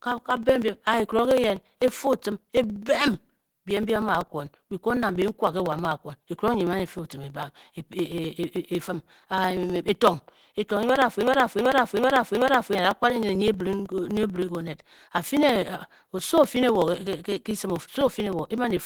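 From the start of the speech the whole clip carries a hoarse, muffled and grainy texture that fits Opus compression. The roughness points to a low bitrate around 16 kbps, with the encoder working in its hybrid mode, where the lower band is coded as speech and the upper band more coarsely. Bandwidth stays wide, with content reaching up to about 20.2 kHz, so the damage shows up as grit and hoarseness rather than a dull top end.

Running on top of that, from 0.05 s to 18.77 s, are periodic USB or driver dropouts: hundreds of small, regular ticks spaced every 63 ms. Each one is a loss of roughly a millisecond of audio that is skipped outright rather than filled with silence. The evenly spaced interruptions suggest a background task stalling the audio path at a fixed interval. Because the tick comes from a jump in the signal, it is audible only while there is sound.

From 11.23 s to 12.75 s a broken-record loop takes over. 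A 0.38 s fragment repeats back to back four times, identical each pass, before normal playback resumes. This is most likely a stall in the player or stream that kept re-sending the last buffered piece. Whatever should have played during that second and a half is missing. The 63 ms ticks continue through the loop.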